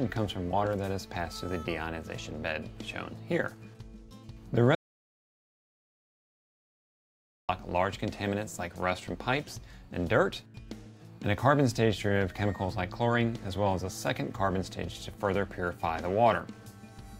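An audio dropout to silence runs from 4.75 to 7.49 s, roughly 2.74 s of silence with no room tone, likely from a lost input connection.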